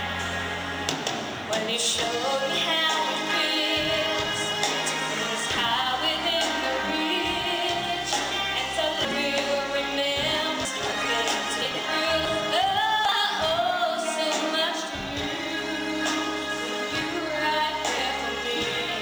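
Sample clock jitter runs through the whole clip. The converter's clock wanders by a few microseconds, so each sample lands slightly early or late. Steep parts of the waveform suffer most. The result is a grainy hiss, roughly 30 dB below the sound, swelling on loud, bright passages and gone in silence.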